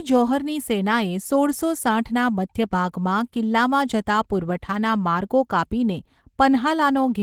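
Opus voice compression runs through the whole speech clip. The sound points to a low rate, around 16 kbps, in hybrid mode. Linear-prediction coding carries the lower band, with a coarse transform layer above 8 kHz up to about 20.2 kHz. Speech sounds plainly hoarse and slightly robotic.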